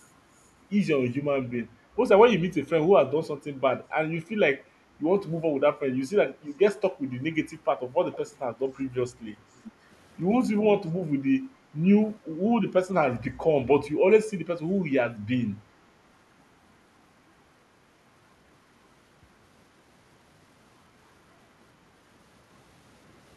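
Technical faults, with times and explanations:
8.13 to 8.30 s and 9.66 to 9.71 s, echo leak: a faint delayed copy of the speech, trailing by 405 ms and roughly 20 dB below it, comes through in two brief scraps. This is likely a far-end loudspeaker's sound that the echo canceller failed to fully remove before it was sent back.
9.36 to 9.54 s and 9.73 to 9.85 s, background gated by the echo canceller: the room tone dips by about 6 dB, for about a fifth of a second and then about a tenth. The canceller briefly pulls the microphone down while it detects loudspeaker playback, then releases it.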